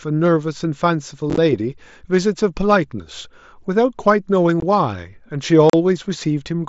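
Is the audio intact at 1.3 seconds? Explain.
No. From 1.30 to 1.38 s there's unconcealed Bluetooth headset packet loss. Over about 75 ms, roughly half the audio, around 37.5 ms in total, drops out as the headset link loses voice packets. Nothing fills the gaps, so you hear silence or an idle pattern in their place. The holes are short, 15 ms at most, with hard edges, giving a brief chopped crackle over the light graininess of the mSBC link.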